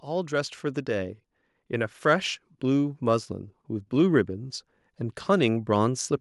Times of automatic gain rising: 0.05-4.58

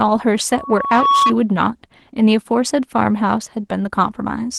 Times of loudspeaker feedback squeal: 0.51-1.33

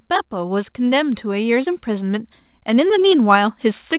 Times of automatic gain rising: 0.30-3.93

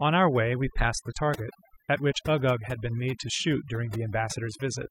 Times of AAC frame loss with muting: none

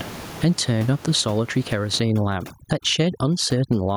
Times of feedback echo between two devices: none

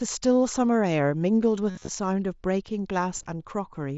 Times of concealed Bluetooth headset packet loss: 1.70-1.88, 3.17-3.26

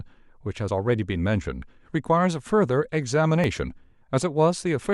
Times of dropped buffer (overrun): 0.69, 3.44

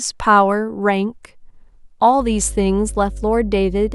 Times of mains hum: 2.17-3.95

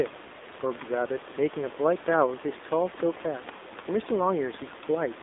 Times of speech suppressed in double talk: none

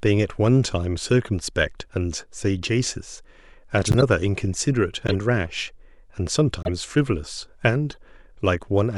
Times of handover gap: none

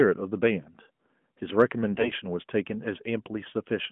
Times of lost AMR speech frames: none

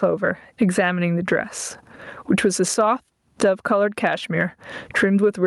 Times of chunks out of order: none

